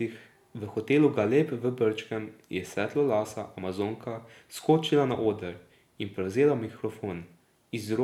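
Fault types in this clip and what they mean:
Nothing stood out on listening to this speech clip.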